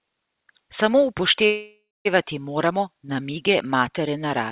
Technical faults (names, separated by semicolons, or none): call audio freeze